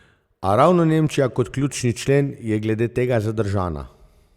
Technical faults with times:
none

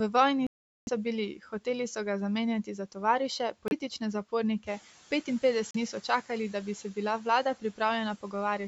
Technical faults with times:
0.47-0.89 Bluetooth stall
2.63-2.96 speech cut by the noise suppressor
3.68-3.73 Bluetooth stall
5.71-5.76 Bluetooth stall

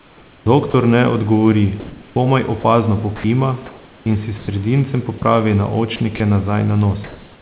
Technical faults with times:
0.00-0.74 sound chopped by the voice detector
1.80-2.64 comfort noise in place of the background
2.60-2.64 sound dropped by the voice detector
3.16-4.48 sound chopped by the voice detector
5.18-5.22 sound dropped by the voice detector
5.96-6.20 sound chopped by the voice detector
7.04-7.41 comfort noise in place of the background

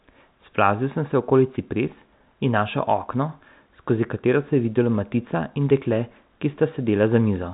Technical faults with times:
none

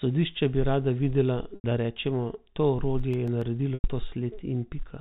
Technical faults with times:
1.55-1.64 packet loss with pitch repetition
2.86-3.41 CD scratch ticks
3.74-3.84 packet loss with pitch repetition

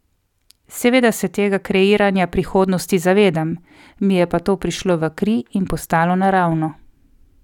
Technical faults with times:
none

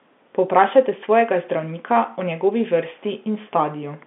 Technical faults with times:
none

